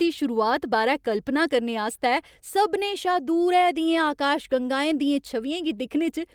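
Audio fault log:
No audible faults anywhere in this speech recording.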